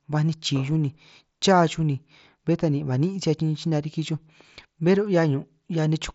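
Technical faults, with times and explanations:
Nothing stood out on listening to this speech, carried over a Bluetooth mSBC headset link with its highest content at about 7.7 kHz.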